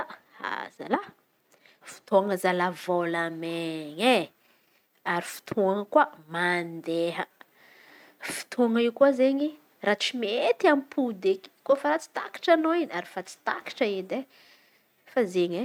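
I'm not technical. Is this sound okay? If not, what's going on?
Yes, nothing stood out as a problem when listening to this speech recording.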